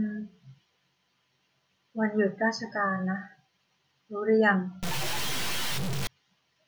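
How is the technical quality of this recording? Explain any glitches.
The recording has one glitch, near the end. From 4.83 to 6.07 s the speech turns harsh and buzzy, and gaps fill with a gritty noise floor. The likely cause is a stuck bit: one data bit held fixed, shifting roughly half the samples by a step around -25 dBFS, a pattern that follows the waveform and flips near zero.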